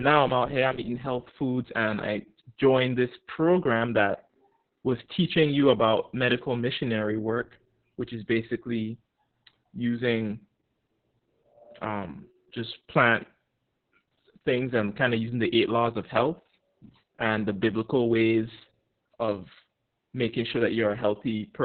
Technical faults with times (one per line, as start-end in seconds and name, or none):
0.00-21.65 Opus voice compression